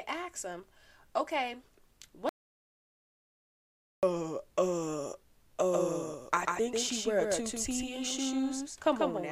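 In this speech clip, the input link was likely lost and the recorder kept writing silence: an audio dropout to silence from 2.29 to 4.03 s, about 1.74 s gone with no room tone. From 5.72 s to the end, a second, slower capture path likely mixed in a doubled audio track, a full-band copy roughly 5 dB quieter trailing around 150 ms behind, starting abruptly.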